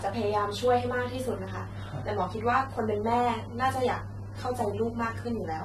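Throughout the speech, the signal has likely gone through AAC compression at a low bitrate, consistent with AAC-LC near 32 kbps. The encoder removes everything above 12.5 kHz and quantises the remaining bands coarsely, leaving a dull, smeared sound with a plainly audible warbling or fizzy texture.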